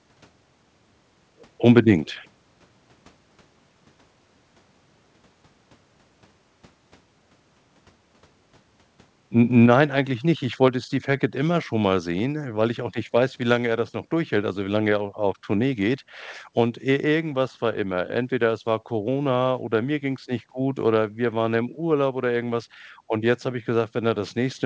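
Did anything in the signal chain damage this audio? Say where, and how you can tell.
Yes. At the call-processing stage, the speech level falls abruptly twice, each time by about 4 dB: at 9.66 s, just before "nein eigentlich nicht", and again at 10.68 s. These are clean steps with no ramp, and both speech and background drop together, so the likely cause is a microphone volume stepped down by automatic gain control lowering the device's input volume. The audio also passed through a G.722 call path, which leaves nothing above 8 kHz.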